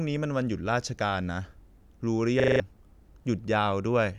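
A system hang loop runs from 2.4 to 2.6 s: the computer stalled while the sound hardware kept replaying its ring buffer, so one 40 ms slice of speech repeats five times at 25 Hz, a rapid stutter replacing about a fifth of a second of audio.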